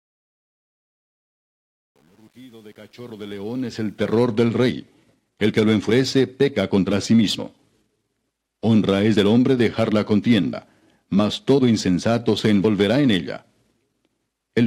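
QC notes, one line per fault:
0.0–4.23 s, truncation distortion on the fade-in: the opening sounds gritty, worst up to about 3.41 s. Quiet samples collapse into coarse square steps with no dither, which fits roughly 9-bit resolution. Full level arrives at 4.23 s.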